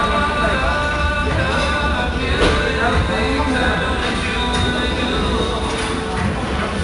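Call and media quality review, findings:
4-bit ADPCM compression, throughout. Gritty hiss riding on every loud passage, clearly audible, with roughness on sharp onsets where the adaptive step lags. Nothing above 10.6 kHz, dulling the top end; consistent with an 88 kbps ADPCM stream at reduced sample rate.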